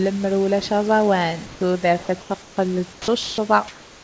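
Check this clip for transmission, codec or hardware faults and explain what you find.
Two kinds of fault appear, both likely from gaps in transmission. The audio has no content above 8 kHz, which fits a wideband call codec such as G.722.

Comfort noise in place of the background occurs at 1.46–1.61 s (just after "ulac aẓawan"), 2.42–2.57 s, 2.93–3.08 s and from 3.68 s to the end. The likely cause is discontinuous transmission: the sender went quiet in the pauses, and the receiver filled them with synthetic noise. The real room background, about 23–25 dB below the speech, turns into flat, featureless hiss and drops by about 1 to 4 dB.

Sound dropped by the voice detector occurs at 2.03–2.09 s, 2.21–2.30 s and 3.23–3.38 s. Here the detector likely mistook part of the speech for background and stopped sending. Comfort noise replaced the sound, so about 40 ms, 50 ms and 130 ms of speech are lost. 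The speech is briefly cut off and returns once the detector triggers again.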